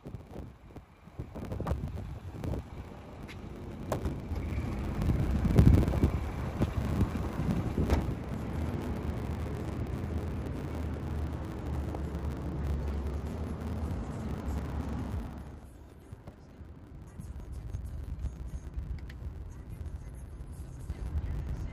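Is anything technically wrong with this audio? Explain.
Yes. A block size mismatch (truncated) runs throughout the clip. One stage hands over longer blocks than the next stage accepts, so the tail of every block is discarded. The result is a steady 100 Hz buzz from the splice points, and the audio plays about 1.09 times faster while keeping roughly its normal pitch. On a waveform, small discontinuities recur every 10 ms. On a spectrogram, they show as fine vertical striations with energy at 100 Hz and its harmonics.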